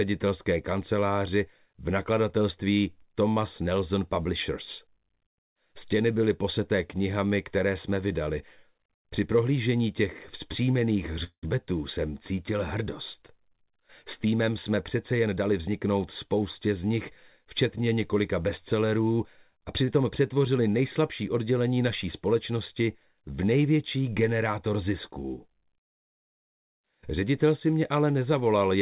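At 11.24 s the sound halts for about 0.2 s, until 11.45 s. This is a call audio freeze, likely caused by packets held up in transit so that the jitter buffer ran dry. The receiver carried the last sound forward as a fading buzz or hiss that decays into roughly 90 ms of silence. When the packets arrive, playback resumes where it left off. Nothing is lost, but a 186 ms gap has been inserted, and the delay grows by that amount.

From 14.21 s to 15.86 s there is a jitter buffer speed-up. The buffer held more audio than its target. To work back down, the receiver cut many short pitch-period-length slices in succession, about a fifth of a second in total. Over this stretch the sound plays at 110% speed with its pitch unchanged, so it comes across as rushed.

From 19.85 s to 19.90 s there is a short stall from a late packet. A packet missed its playout time, and the receiver stretched the preceding sound by 31 ms to cover the wait, then continued from the same point. 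No audio is missing. The effect is a sound held a fraction too long, with a faint buzzy dip. Throughout, the band stops at 4 kHz, which is consistent with the G.711 mu-law call path.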